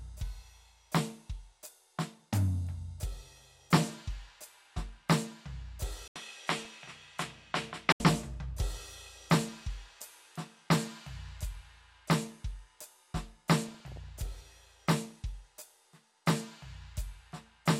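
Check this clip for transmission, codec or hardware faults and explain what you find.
Two kinds of fault affect this music clip.

From 6.08 to 8.00 s, the input likely switched to a poorer device. After an 80 ms gap, nothing passes above 12 kHz and faint new hiss appears. Loudness stays roughly the same.

DAB burbling occurs at 6.55 to 6.97 s and 13.68 to 14.40 s. Weak reception let a small fraction of bit errors slip past correction. Short blips of noise hit single sub-bands.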